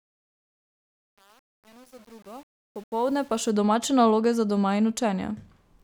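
A speech recording opens with a fade-in from the start to 3.50 s that sounds gritty, worst until about 3.17 s, before the level settles just ahead of "domače naloge za doma". This is truncation distortion on a fade. The gain stage keeps too few bits and adds no dither, which fits an 8-bit stage, so the quiet part of the rising fade collapses into a few coarse square steps.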